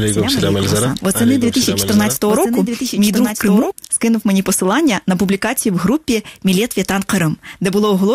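From the start to 3.72 s, a doubled audio track trails about one and a half seconds behind, roughly 5 dB quieter. A second capture path likely caused it. It stops abruptly.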